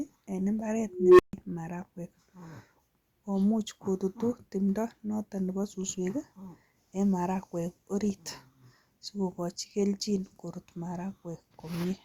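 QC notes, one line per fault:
0.90–1.33 s, unstable filter: a recursive filter's feedback ran away, so a tone around 400 Hz swells over about 0.29 s, clips harshly, then overflows and drops to silence for about 0.14 s until the filter resets, heard as a rising squeal cut off abruptly.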